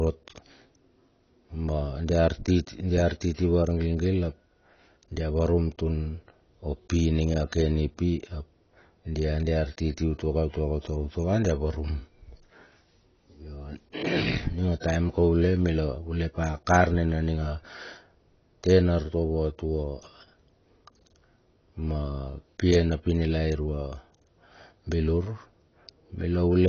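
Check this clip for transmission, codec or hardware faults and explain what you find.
One codec fault runs through the whole speech clip: AAC compression, likely AAC-LC at a low bitrate around 24 kbps, cuts everything above 6.6 kHz, leaving speech dull, smeared and warbly.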